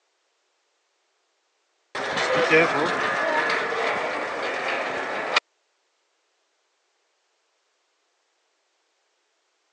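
No technical faults can be heard anywhere in the audio: the signal holds steady throughout, with no interruptions, distortion or level problems.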